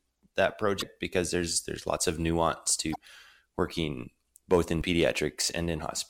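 Speech, with two kinds of fault. Damaged data in the compressed stream causes short glitches at 0.78–0.82 s and 2.92–2.96 s. Each lasts about 40 ms. The decoder hits corrupted frames there, misreads them and loses sync until it finds a valid frame header. Hard clipping follows at 4.53–4.58 s. A peak drives about 4 dB past what a stage can pass, so its top is cut flat. The flattened wave adds high harmonics, heard as a brief crackle.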